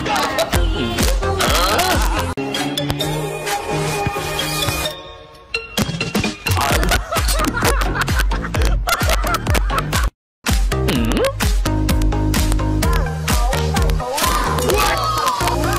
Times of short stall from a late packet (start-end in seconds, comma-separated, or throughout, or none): none